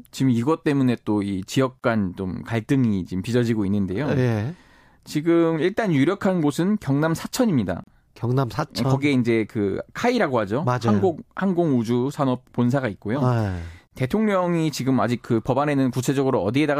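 A speech clip with a gap at a join of encoded pieces, recurring every 6.0 s: silences at 1.79 to 1.84 s (43 ms), 7.84 to 7.87 s (37 ms) and 13.87 to 13.91 s (37 ms). Each segment was encoded separately and joined untrimmed, so encoder start delay and last-frame padding remain. Unlike a dropout, the speech resumes exactly where it stopped with nothing lost, the edges are codec-smeared, and the gaps fall on a strict regular interval.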